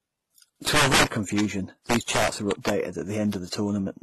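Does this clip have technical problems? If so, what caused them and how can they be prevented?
Yes. Throughout the speech, the top end stops at 12.3 kHz, and the sound carries a layered mix of different coding artefacts heard together. This is likely transcoding between lossy codecs. The mixture suggests a low-bitrate MP3 stage and a very low-bitrate HE-AAC-style stage before a final, higher-rate encode. The later encoder preserved the earlier damage rather than repairing it, and kept the lowest bandwidth limit in the chain. To prevent it, encode once from the original source and keep any intermediate copies lossless.

Integer overflow appears twice, at 0.67 to 1.41 s and at 1.90 to 2.70 s. There the loudest moments break into harsh, violent cracks that are far sharper than ordinary clipping. The signal was driven about 9 dB past the integer limit in the first stretch and about 5 dB in the second. 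Every peak beyond that limit wrapped around to the opposite extreme instead of stopping at full scale, so each one became a full-range jump. To prevent it, use saturating arithmetic or floating-point headroom, and limit gain before converting back to integers.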